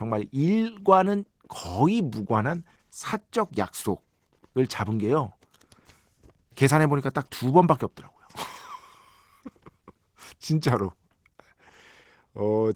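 Opus voice compression runs the whole way through, and the speech sounds hoarse and slightly robotic with coarse upper band texture, which fits hybrid Opus at around 16 kbps.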